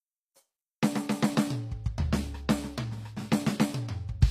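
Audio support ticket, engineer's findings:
Gritty, metallic treble throughout the music. Likely HE-AAC compression at low bitrate, consistent with about 24 kbps: upper band rebuilt by spectral band replication, harmonics misaligned across crossover. Spectrogram: treble shows repeated, smeared copies of lower-band patterns, hard ceiling at 15.5 kHz. Waveform: no visible defect.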